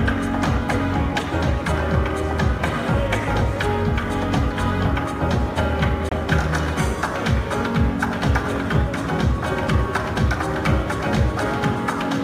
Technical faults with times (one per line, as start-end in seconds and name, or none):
6.09-6.12 Bluetooth stall